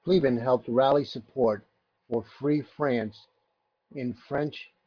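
Nothing stood out on listening to this speech recording.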